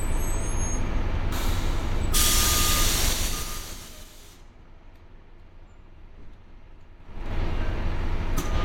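From 3.05 to 4.12 s the level drops about 20 dB in 3 dB steps, roughly seven a second, causing zipper noise. Each unsmoothed jump clicks, giving a ticking texture. From 6.98 to 7.34 s the level climbs back faster, roughly twenty steps a second, so the clicks merge into a rapid zip.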